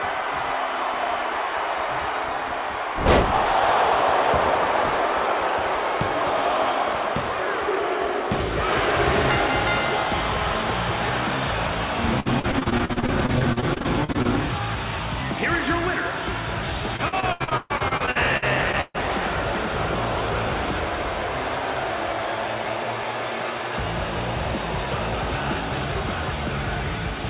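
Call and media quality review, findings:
Choppy, robotic audio with pieces dropping out, 12.2–14.26 s and 16.96–18.97 s. Repeated packet loss: jitter buffer repeatedly extends the last sound over holes up to 130 ms, in a band-limited path topping out at 4 kHz, consistent with G.711.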